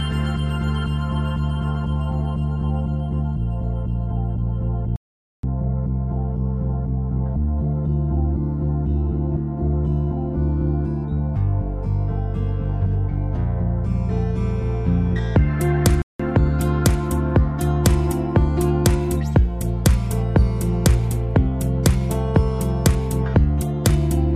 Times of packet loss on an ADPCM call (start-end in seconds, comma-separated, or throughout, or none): none